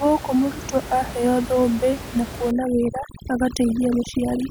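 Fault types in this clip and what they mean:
Overdone noise removal: A noise reduction stage is set too hard. From 2.51 s, right after "mũrutwo aheyo thũmbĩ na", it runs to the end. Narrow frequency bands near its noise estimate get pushed down or cut out. The room noise, about 12 dB under the speech, drops and breaks up into twinkling specks. Quieter parts of the speech vanish with it.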